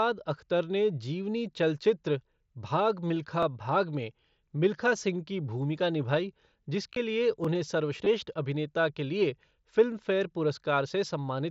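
At 3.09 s, just before "भाग' में मिल्खा सिंह", concealed Bluetooth headset packet loss removes about 22.5 ms of audio, which fits three lost frames. The receiver fills the gap by repeating the closest-matching recent waveform, so the dropout comes through as a short buzzy hold.

At 3.43–3.45 s, before the same words, overlapping chunks cause a 20 ms segment to play twice. Chunks here are 4.0 s long and each one begins before the previous one finishes, so the doubled segment is heard as a brief stutter at the join.

A second concealed loss at 6.93–6.96 s covers about 30 ms, which points to roughly four frames. This gap is long enough that the patched-in waveform comes through as a short buzzy hold, with a slight warble when the real sound resumes.

At 7.45–7.47 s the next 4 s chunk boundary repeats another 20 ms, producing the same brief stutter as the first one.

At 8.05 s, just before "अभिनेता के लिए फिल्मफेयर", a third concealed Bluetooth headset packet loss covers 15 ms, consistent with two lost frames. 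It comes through as a brief buzzy hold, and the underlying mSBC headset codec adds a light grainy noise on loud sounds.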